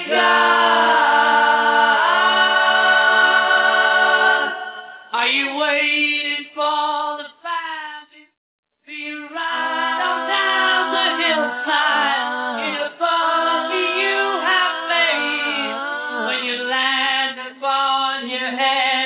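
No technical faults can be heard in this audio.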